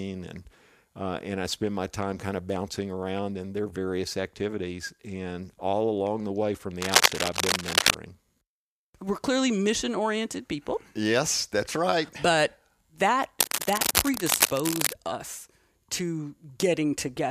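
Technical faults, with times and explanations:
6.81–7.95 s and 13.39–14.94 s, cable scratch noise: right after "along the way from" and again after "that's right but that", ragged scratchy rustling lands on the speech, first a bit louder than the voice, then about level with it, likely a worn cable or connector being moved with its contact resistance jumping around.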